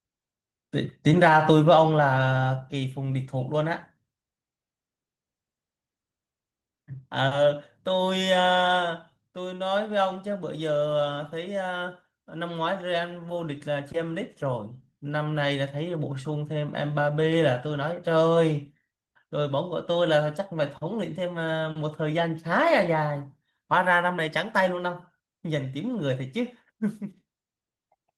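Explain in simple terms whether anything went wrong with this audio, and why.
Nothing went wrong with this recording.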